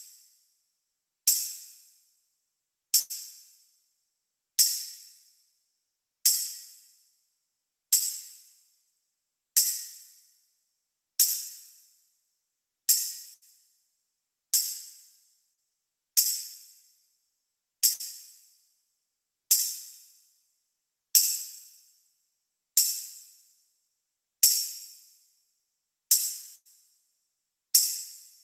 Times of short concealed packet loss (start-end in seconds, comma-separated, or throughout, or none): 15.53-15.59